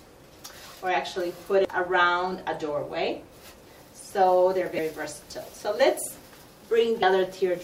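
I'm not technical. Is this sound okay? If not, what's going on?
No. There is damaged data in a compressed stream: corrupted bytes confuse the decoder, giving brief glitches at 1.65 s, 4.75 to 4.79 s and 7.02 s.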